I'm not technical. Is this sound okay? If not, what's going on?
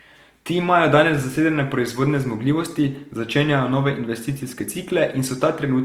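No. From start to finish, the speech sounds rough and grainy, as if a fine layer of hiss or sand were stuck to it, and clear tones come out fuzzy rather than clean. This is Opus compression, most likely applied when the file was shrunk with too little data to spare. Instead of leaving gaps, the encoder fills in detail with copied or noise-like sound, which creates that gritty texture throughout the clip.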